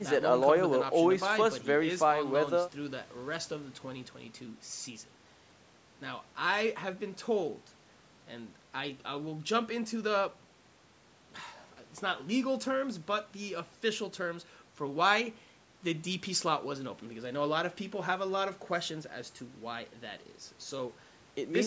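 Nothing here goes wrong technically: the speech just carries the usual mark of a call microphone's processing, with the lowest bass trimmed away and nothing above 8 kHz.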